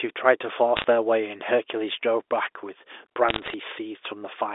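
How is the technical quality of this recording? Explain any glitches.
The recording is a telephone-band speech clip with two short bursts of damage. Bit errors on a digital phone line strike at 0.77 to 0.85 s and 3.29 to 3.54 s: flipped bits, well under one percent, corrupt single samples in the G.711 stream, producing sharp ticks and crackle over speech that stays intact and limited to the narrow 300 Hz to 3.6 kHz line band.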